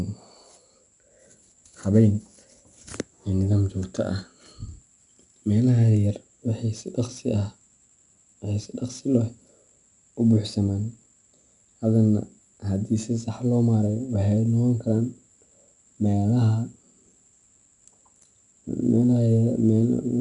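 A gritty hiss clings to every louder stretch of speech throughout, sharp onsets turn rough, and nothing reaches above 10.6 kHz. This is 4-bit ADPCM compression: each sample is stored as a 4-bit step from a prediction, and the step size adapts as it goes, so the error rises and falls with the signal.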